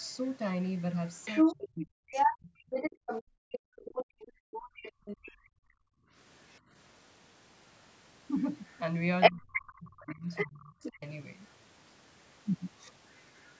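From 0.94 to 5.36 s a second voice, the other side's voice leaking through, runs under the talker at roughly the same level or a little above it. This is likely loudspeaker playback that the echo canceller failed to remove from the microphone. In the same stretch, from 1.44 to 2.86 s, the talker's own speech dips sharply, by something like 40 dB at worst. That is speech suppressed in double talk: with both sides active, the canceller likely pulled everything down.

From 3.23 to 6.14 s the background is gated by the echo canceller. The room sound drops by about 40 dB for around two seconds in total while the canceller holds the microphone down, then returns.

The pattern repeats later. Leaked far-end voice appears from 9.2 to 10.98 s, and the talker is suppressed in double talk from 9.3 to 11.02 s, dipping by around 30 dB while the other voice plays.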